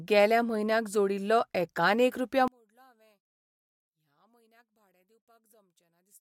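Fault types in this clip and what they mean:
One channel inverted: from about 2.48 s to the end at 6.20 s, the speech drops by about 37 dB and nearly disappears, leaving only a faint trace. The likely cause is one side of the stereo pair flipped in polarity. When the channels are summed to mono, the centred speech that both sides share cancels itself out, and the small difference between the channels is all that survives.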